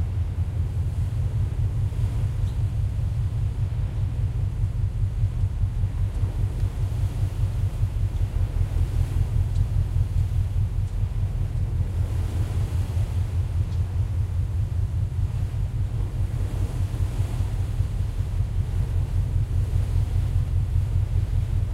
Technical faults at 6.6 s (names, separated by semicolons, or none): none